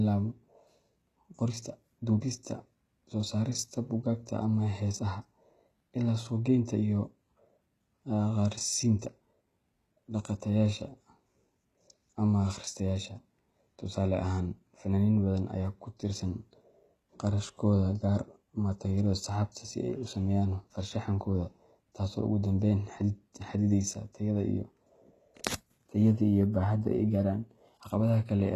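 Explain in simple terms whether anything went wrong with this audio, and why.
Yes, the speech sounds gritty and lispy throughout. The treble stops near 12.3 kHz. The likely cause is HE-AAC compression, which fakes treble by copying lower sounds upward.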